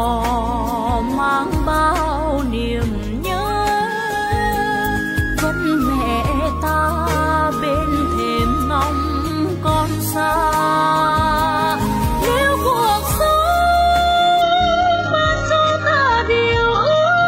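At 14.42 s the sound turns abruptly dull and watery, with nothing above 8 kHz, until the end: an adaptive stream at a lower bitrate, consistent with a low-bitrate HE-AAC rendition.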